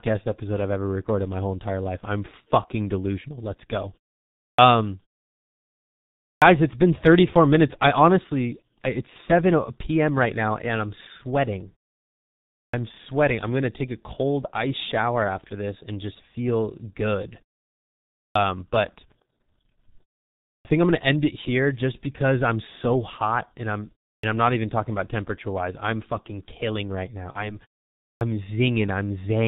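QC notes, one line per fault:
Throughout: G.723.1 codec at 6.3 kbit/s. Heavy damage leaves speech muffled with nothing above 4 kHz. Its slowly updated voice model adds hoarseness and blurs consonants, which plain low-pass filtering would not.
4.53, 6.36 (before "it's been"), 12.68, 18.3, 20.59 ("think I'm gonna end"), 24.18 ("I'm not even talking"), 28.15 s: clipped start after a pause. About 55 to 60 ms of each onset is lost while the output device wakes after 0.3 to 1.4 s of silence. The silent gaps between phrases are not the fault; here the speech onsets themselves are missing.
27.32 to 27.58 s: VoIP packet loss concealed by the speech codec. This fits a single lost 30 ms frame. The decoder stretches it into a buzzy tone or coloured noise that fades, and the voice stays weak or distorted for roughly a quarter second.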